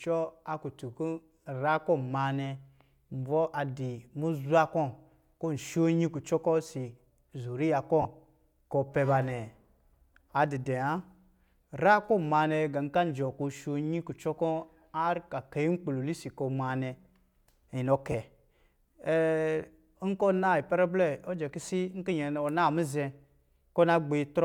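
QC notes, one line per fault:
8.02–8.05 s and 18.12–18.14 s, lost LE Audio frames: two short dropouts in the speech, about 30 ms and then 20 ms, which fits three and two 10 ms frames going missing over the Bluetooth link. The LC3 decoder covers each gap by replaying the last good spectrum with its phases scrambled, so the voiced sound briefly turns into a grainy, noisy smear instead of a clean click or silence.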